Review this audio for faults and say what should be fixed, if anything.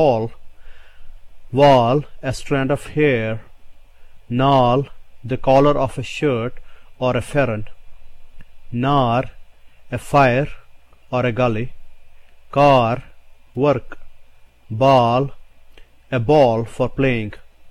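Nothing in the recording calls for a fix, as no technical fault can be heard anywhere in it. The audio holds steady throughout without any disturbance that would need attention.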